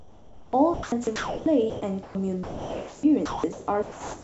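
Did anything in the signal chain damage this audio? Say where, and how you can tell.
Yes. At the call-processing stage there is sound chopped by the voice detector from 0.0 to 2.15 s and from 2.43 to 4.23 s, with roughly 1.3 s of each stretch swapped for comfort noise, likely from a sender-side detector gating too aggressively. The spectrogram shows speech energy broken by flat synthetic-noise blocks, everything capped near 8 kHz by the G.722 path.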